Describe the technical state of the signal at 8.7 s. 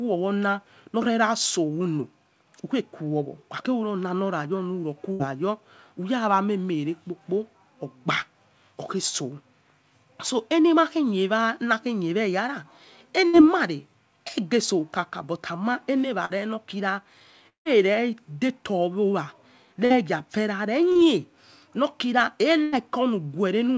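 At 8.7 s the speech is intact, with no dropout, click or distortion, and the band ending near 8 kHz is simply the ordinary limit of the G.722 call path it passed through.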